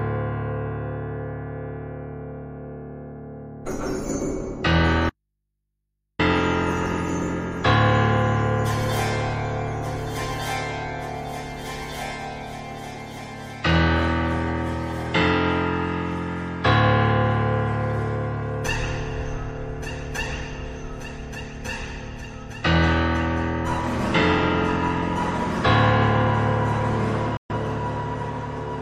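At 5.10 s the sound drops out for about 1.1 s, leaving only mains hum around 55 dB down, an audio dropout to a faint residue, likely a break upstream while the input stayed live. Near the end, at 27.37 s, a digital broadcast dropout mutes everything with a quick 3 ms fade for 128 ms, which fits a few failed frames.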